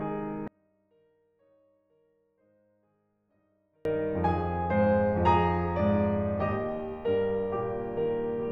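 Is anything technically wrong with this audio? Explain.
Yes. From 0.48 to 3.85 s the music collapses by about 40 dB, likely because one channel is inverted: the two channels cancel where they match. Unlike a dropout, it isn't silent. A faint residue of the differences between the channels remains.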